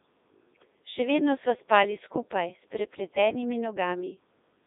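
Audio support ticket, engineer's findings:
Robotic, buzzy speech across the whole clip, band-limited to roughly 300 Hz to 3.7 kHz. Probable component: Codec 2 vocoder, consistent with its 3.2 kbit/s mode. Only pitch, voicing, energy and envelope survive; the decoder rebuilds speech from sine waves, so the waveform is lost. Damage heavy.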